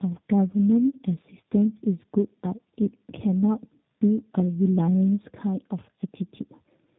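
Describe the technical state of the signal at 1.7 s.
At 1.7 s, as throughout the clip, the speech shows tandem speech coding: it passed through two speech codecs in succession, likely AMR-NB then G.729A, the second re-coding the first's flaws. It sounds rough, muffled and warbly, with spectrogram energy stopping at about 3.8 kHz.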